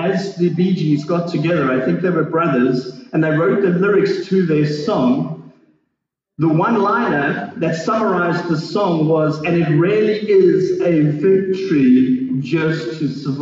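From 10.42 s to the end at 13.41 s, the pace abruptly drops to about 0.68 times normal speed while the pitch stays put, a time-stretched section. The slowed passage drags. The likely cause is software lengthening the audio by repeating short fragments. On a spectrogram, harmonics keep their frequencies but events spread wider in time, and the waveform shows repeated, overlapping envelope shapes.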